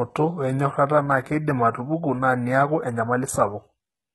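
Throughout, the speech has gritty, lispy sibilants and nothing above 11.8 kHz, likely from heavy HE-AAC compression near 16 kbps rebuilding treble by band replication.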